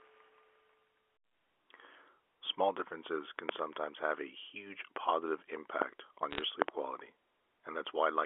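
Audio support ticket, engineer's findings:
Loud pop, 3.49–3.51 s: sharp pop over the speech, which continues underneath. Peak roughly 25 dB above the speech level. Likely a voltage step or pulse from a connector, switch, static discharge or driver glitch, shaped into a short transient by the downstream circuitry.

Loud pop, 4.96–4.98 s: single pop, weaker, peak roughly 15 dB above the speech. Likely the same impulsive mechanism, speech uninterrupted beneath it.

Loud pop, 5.82–5.84 s: single pop, peak roughly 25 dB above the speech. Likely the same mechanism.

Loud pop, 6.62–6.71 s: two pops in quick succession, peak roughly 25 dB above the speech. Likely the same impulsive mechanism, repeated.

Bit errors on a digital phone line, 6.30–6.42 s: brief burst of ticking crackle over unchanged speech, error rate around half a percent. Flipped bits on the line each corrupt single samples. Sign or high-order bit hits in the A-law words produce the sharp ticks. 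The burst is short enough to fit a handful of corrupted frames. G.711 A-law transport at 64 kbps is passing its normal 300 Hz–3.4 kHz telephone band.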